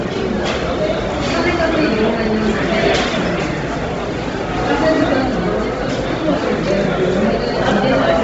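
Throughout, nothing sounds above 7.8 kHz and the remaining top is grainy and noise-filled. A spectrogram would show a hard ceiling with speckled upper bands, likely from Bluetooth LC3 compression.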